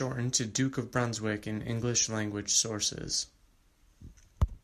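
Speech recording with no audible technical faults.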